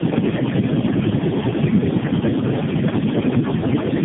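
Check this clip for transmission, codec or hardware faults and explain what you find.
The clip shows tandem speech coding throughout. The speech sounds as though it passed through about four low-rate speech codecs in a row, each recoding the last one's damage. It is band-limited to 3.5 kHz, muffled, rough and warbly, more than any single narrowband codec produces.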